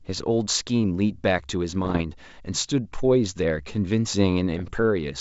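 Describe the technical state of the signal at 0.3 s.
At 0.3 s the signal is intact, with no fault at that moment; the speech carries the wideband telephone character of G.722 coding at 64 kbit/s, extending up to about 7 kHz.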